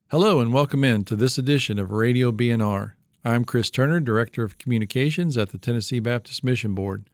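Nothing stood out on listening to this speech.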